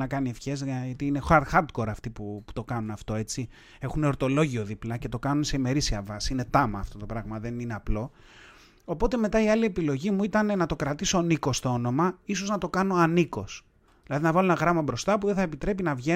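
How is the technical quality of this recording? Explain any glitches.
Nothing stood out as a problem when listening to this recording.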